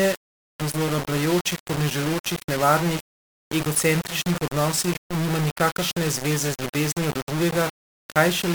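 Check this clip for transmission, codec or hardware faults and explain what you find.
The clip has one fault, present throughout the speech: low bit depth without dither.

From start to end, quiet passages turn gritty and the softest moments sputter or drop to silence. The likely cause is rounding to very few levels without dither, which fits about 4 bits. The error tracks the signal at roughly 10 dB below it. The waveform shows coarse stair-steps, and the spectrogram shows broadband grain that moves with the sound.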